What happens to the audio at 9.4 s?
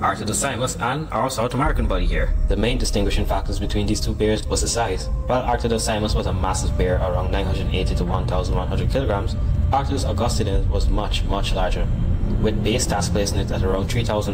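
Nothing goes wrong at 9.4 s: the audio plays through that moment intact, with no dropout, click, glitch or other audible fault.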